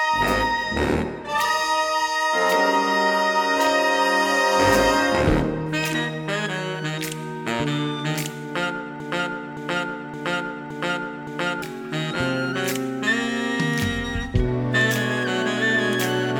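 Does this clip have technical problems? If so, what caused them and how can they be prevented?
Yes. From 9.00 s to 11.62 s there is a broken-record loop. A single 0.57 s fragment plays five times back to back, identical on every pass, and the audio that belonged in that stretch is lost. The likely cause is a player, encoder or stream that stalled and kept resending the last fragment it held. Unlike an echo, the copies neither fade nor overlap, and unlike a brief stutter, the repetition lasts more than two seconds. To prevent it, the playback or streaming chain should detect a stalled buffer and resynchronise or output silence instead of replaying stale data.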